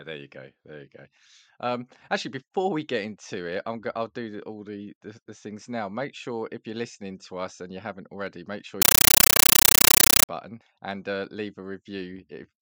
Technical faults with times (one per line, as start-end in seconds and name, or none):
8.82-10.29 compressed stream played as audio